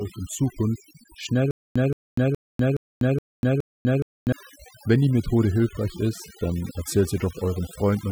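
Overdone noise removal runs through the whole speech clip: bands near the noise floor are cut away, leaving a lowered background with twinkling specks. From 1.51 s to 4.32 s there is a stutter with silent gaps: a 173 ms fragment repeats six times, separated by 246 ms of digital silence, likely from a stalled stream.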